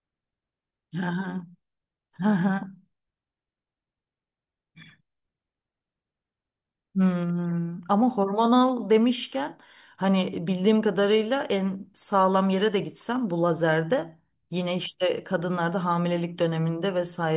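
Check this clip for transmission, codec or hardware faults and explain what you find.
No faults detected in this clip.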